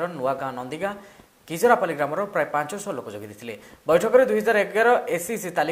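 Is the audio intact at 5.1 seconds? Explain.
Yes, the audio at 5.1 seconds is intact, with no dropout, click, distortion or other fault audible at that moment.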